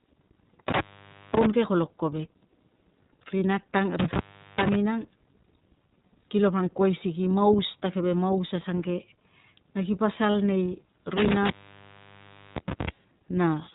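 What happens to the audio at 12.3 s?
At 12.3 s you're in the middle of an intermittent contact fault running from 11.17 to 12.89 s. A loose connection keeps opening, so the sound drops out for about 1.06 s in total, with crackles at the break edges and faint hiss in the gaps.

Underneath that, the iLBC codec is audible here as everywhere else. It's narrowband, so nothing above 4 kHz survives. The rough, slightly synthetic texture fits independently coded 30 ms frames at around 13.33 kbps.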